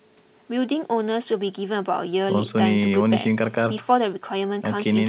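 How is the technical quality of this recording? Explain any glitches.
No glitches to worry about here: the speech has the narrow telephone-style sound of a call, with nothing above about 4 kHz, which fits the G.711 codec used on ordinary phone lines, and nothing goes wrong along the way.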